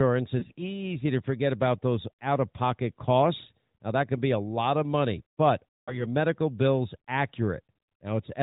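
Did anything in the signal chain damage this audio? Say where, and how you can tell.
Yes: lost AMR speech frames on the radio link. At 0.40–0.62 s, before "to forget about those", brief warbling dips suggest isolated single frames. At 5.76–6.07 s, between "lot of money but" and "medical bills", 140 ms smears into fading buzz as the decoder repeats stale settings with falling gain. A spectrogram shows frozen, decaying harmonics, and the waveform envelope shrinks.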